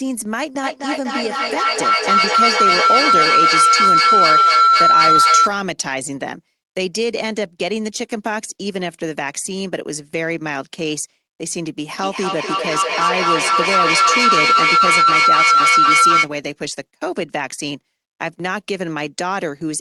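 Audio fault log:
0.63–5.55 s and 11.95–16.33 s: feedback howl. Two devices on the call shared a room, so the microphone-to-loudspeaker loop gained level each pass. The repeats come roughly every 0.3 s, grow instead of fading and narrow to a tone near 1.5 kHz, peaking about 9 dB above the speech.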